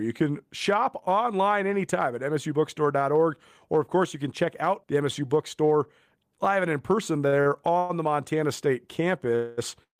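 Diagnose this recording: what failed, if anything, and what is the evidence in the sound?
Repeated stalls (stutter) occur between 7.27 and 7.91 s, at the network and jitter-buffer stage. The speech hitches five times, with about 218 ms of stretched, continued sound and the longest hold at 112 ms. Packets arrived late, the buffer kept draining, and nothing was lost.

A call audio freeze is heard twice. From 9.35 to 9.59 s, 221 ms of continued buzz holds the speech. From 9.83 to 9.99 s, 156 ms is held, fading into 120 ms of silence. The likely cause is packets held up in transit, emptying the jitter buffer until playback resumed where it stopped.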